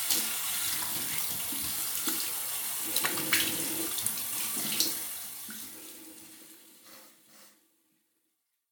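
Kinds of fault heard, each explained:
No kinds of fault are heard in these sounds.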